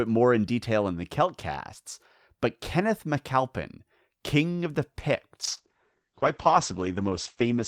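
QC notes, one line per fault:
5.46 to 7.68 s, call bitrate drop: after "of the" the speech turns rough and muffled, cut off above 8 kHz, which fits the encoder falling from about 64 to 9 kbps.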